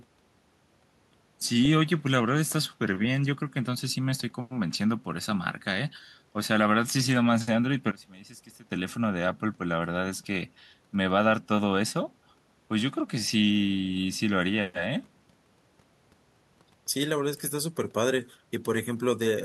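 At 7.91 s the speech suddenly drops away, sitting about 21 dB lower until it comes back at 8.71 s. That's the classic signature of one channel inverted: with one side's polarity flipped, everything the two channels share cancels when they're folded to mono, and a centred voice is exactly that shared part. Here that's most likely what happened, leaving only the faint residue of whatever differs between the channels for those 0.8 seconds.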